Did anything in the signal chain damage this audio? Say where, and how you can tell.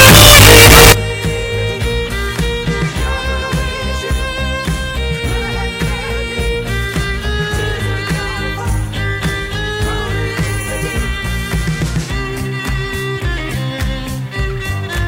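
Yes: sample-format conversion likely mixed up signed and unsigned 8-bit samples. From 0.0 to 0.92 s, zero crossings jump full-scale into harsh, uniformly loud distortion.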